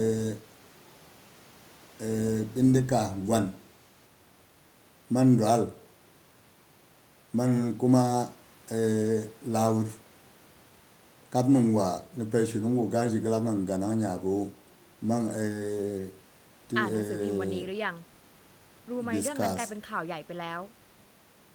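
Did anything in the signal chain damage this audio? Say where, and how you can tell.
No, nothing in this speech recording stood out on listening as damage from any stage of the signal chain.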